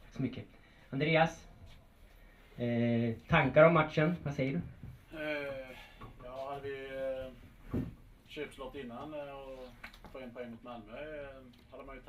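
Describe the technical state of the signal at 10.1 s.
At 10.1 s the signal is intact, with no audible fault at that moment.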